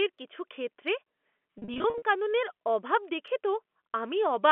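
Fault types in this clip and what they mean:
packet loss with pitch repetition: brief buzzy, held patches between 1.58 and 2.02 s, where lost gaps of up to 40 ms were bridged by repeating the last pitch period.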